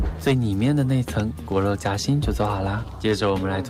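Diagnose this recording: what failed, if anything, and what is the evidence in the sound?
The failure sits at the network receive stage, in the jitter buffer. The sign is clock drift between sender and receiver. The sender's clock runs slow, by roughly one and a half percent. Audio arrives a little slower than the receiver plays it out. The buffer keeps draining toward empty. To avoid running dry, the receiver has to stretch what it has. That drift drives the edits heard in the sound.

The evidence is repeated timing corrections from 0.41 s to 3.1 s. Small hiccups recur at uneven intervals through that stretch. Playback runs at 98% speed there. All the edits go one way: the receiver repeats short pieces rather than cutting them. Together they add around 50 ms to the sound. Each repeat is tiny, so it is heard, if at all, as a slight stumble.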